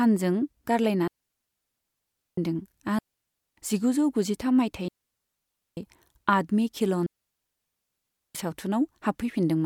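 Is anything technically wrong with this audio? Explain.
Yes, the speech keeps cutting out. It's a digital wireless dropout, at 1.08–2.38 s, 2.99–3.57 s, 4.88–5.77 s and 7.06–8.35 s, with gaps of roughly 0.6 to 1.3 s. The receiver loses too much data and mutes almost instantly, so you get clean holes of near silence with no noise burst around them.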